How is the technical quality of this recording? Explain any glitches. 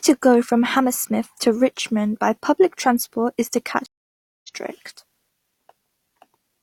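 The speech has one stream reconnect fault. At 3.86 s, after "public transport is to", the audio goes silent for 575 ms, then a fresh decoder resumes roughly 0.3 s further along.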